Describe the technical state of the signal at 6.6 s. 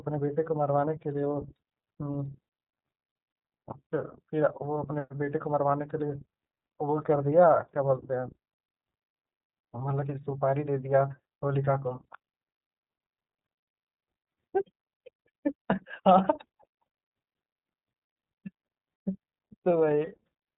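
At 6.6 s the speech carries iLBC codec damage, present through the whole clip. Each 30 ms frame is coded on its own, which fits the 13.33 kbps mode. Nothing above 3.8 kHz survives. The speech sounds muffled, a little rough and synthetic.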